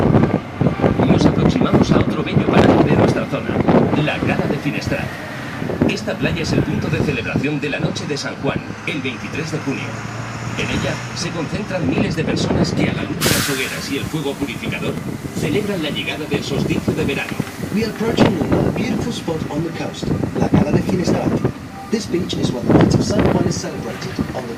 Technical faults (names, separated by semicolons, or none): processor overload crackle